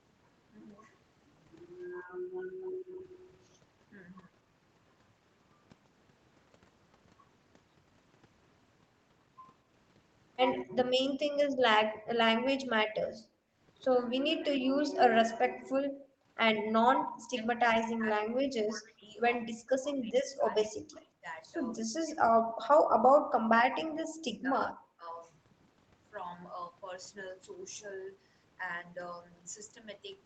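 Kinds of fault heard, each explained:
Speech suppressed in double talk: at 1.94–3.04, 10.63–12.55, 13.3–13.54, 14.07–14.84, 16.91–21.28 and 21.82–25.07 s the speech dips, by up to about 40 dB, for around three seconds in the longest stretches. Most likely an echo canceller, unable to separate talkers, turned both down.
Echo leak: at 3.08–3.3 s a faint copy of the speech returns 209 ms late, about 30 dB below it. The loudspeaker side's echo canceller likely left part of its microphone pickup in place, and that residue was sent back.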